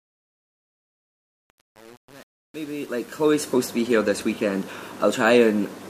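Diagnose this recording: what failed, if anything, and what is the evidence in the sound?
The failure is truncation distortion on the fade at the gain or sample-format conversion stage. From 0.0 to 3.54 s the fade sounds gritty, and the waveform shows staircase steps with broadband hash on the spectrogram. The undithered truncation fits roughly 7-bit resolution.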